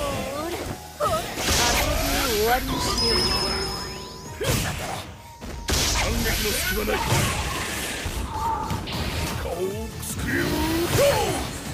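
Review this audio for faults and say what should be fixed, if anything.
Nothing here needs fixing; I listened all the way through and didn't catch a single technical fault in the audio.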